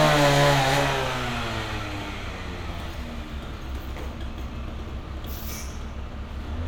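From 4.84 s to the end at 6.68 s, periodic clock jitter appears: the converter's sampling clock is being modulated at around 400 Hz, placing sidebands either side of each component at that spacing. The sound takes on a rough, metallic edge, strongest in the higher frequencies.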